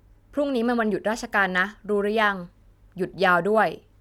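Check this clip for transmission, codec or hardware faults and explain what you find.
Nothing faulty turned up anywhere in this speech recording.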